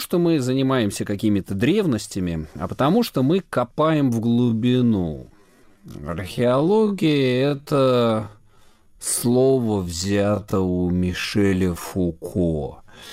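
From 4.28 s to the end, a time-stretched section plays at about 0.54 times normal speed. Pitch holds steady, but the sound drags. Software likely stretched it to fill a length.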